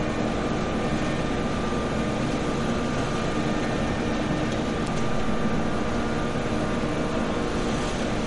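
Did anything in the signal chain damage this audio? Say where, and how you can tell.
Yes. Throughout, the audio has a watery, swirling texture with smeared attacks, and nothing sits above 11.2 kHz. That points to the codec stage, likely MP3 compression at a low bitrate near 48 kbps. A spectrogram shows a hard ceiling at 11.2 kHz and weak components flickering on and off between frames.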